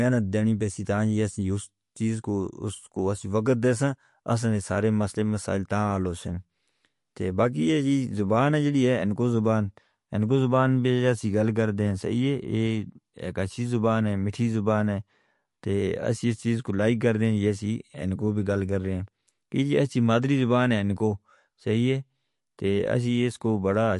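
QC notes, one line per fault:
Throughout: MP3 compression, likely encoded at a low bitrate, with damage that points to roughly 48 kbps. Short of bits, the encoder removes everything above 11.3 kHz and switches weak frequency lines on and off between frames, so the speech sounds dull, watery and swirly.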